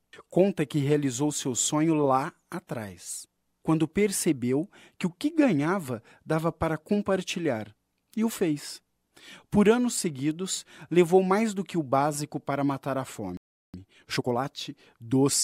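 At 13.37 s the sound just drops out mid-flow and stays silent until 13.74 s, a playback stall of about 370 ms. The likely cause is the player running dry of buffered data, or its output thread getting blocked, so nothing reached the output for that gap.

Right after, from 13.74 to 14.46 s, you get time-compressed catch-up: the player trims its backlog by cutting tiny slices and cross-fading the joins, so the audio runs at about 1.5 times speed, same pitch.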